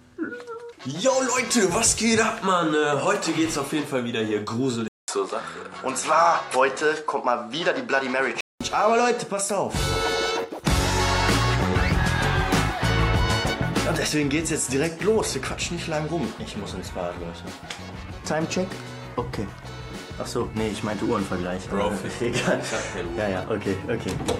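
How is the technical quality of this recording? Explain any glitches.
The recording has one glitch, a stretch of narrower, duller sound from 4.88 s to 8.61 s. It opens with a 200 ms silence, after which nothing above 11.4 kHz comes through and a faint new background noise sits well below the signal, while the overall level stays about the same. This is likely an input switched to a poorer device mid-recording. The replacement input cuts the top band and brings its own noise floor until the original input returns at 8.61 s.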